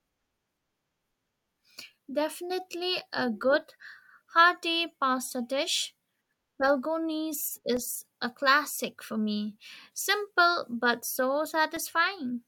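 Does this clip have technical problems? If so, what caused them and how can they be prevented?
Yes. Periodic USB or driver dropouts occur every 2.0 s, from 1.78 s to 11.77 s. Each time, about 2 ms of the speech drops to silence, giving a regular tick. A background task is stalling the bus or driver. Give the interface its own USB port and disable background polling tasks.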